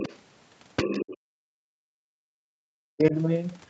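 A speech recording with two faults. First, the other side's voice leaking through, likely residual echo the canceller missed: a second, fainter voice appears from 0 to 0.17 s at roughly 15 dB below the talker, from 0.76 to 1.16 s at about 10 dB below, and briefly at 2.99 to 3.03 s, much quieter. This leakage adds a voice, whereas the second fault takes the talker's own voice away. From 1.16 to 3.15 s there is speech suppressed in double talk, likely the canceller ducking everything while both sides spoke. The talker's voice drops by around 40 dB at its deepest over roughly two seconds, with the 8 kHz call bandwidth audible throughout.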